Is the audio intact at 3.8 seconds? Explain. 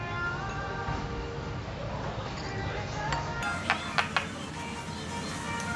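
No. From 3.42 s to the end at 5.75 s, wrong sample rate playback runs the audio 1.5 times fast and about 7 semitones high, consistent with 16 kHz material played at 24 kHz. Unlike a pitch shift or time-stretch, speed and pitch rise together.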